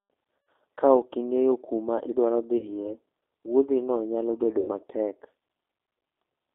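From the start, the speech carries the plainly audible roughness of the G.729 codec, most likely its G.729A variant at 8 kbit/s. It is confined to a telephone band of about 200 Hz to 3.6 kHz. The decoder rebuilds each 10 ms frame from a vocal tract filter, a pitch predictor and a few pulses, so voiced sounds come out slightly buzzy and synthetic, and fine detail is lost.

At 0.46 s the first VoIP packet loss concealed by the speech codec occurs. About 90 ms of audio, which fits three lost packets, is replaced by the decoder stretching its last pitch and filter into a fading buzzy tone or coloured noise, and the speech stays weakened briefly after it resumes. Between 2.57 and 2.93 s a 60 ms gap, consistent with two packets, is bridged the same way. At 4.59 to 4.70 s another 90 ms loss is concealed, with the same fading concealment followed by distorted recovery.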